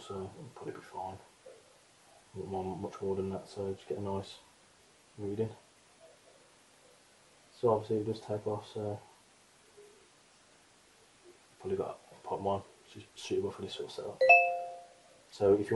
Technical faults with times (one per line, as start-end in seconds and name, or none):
none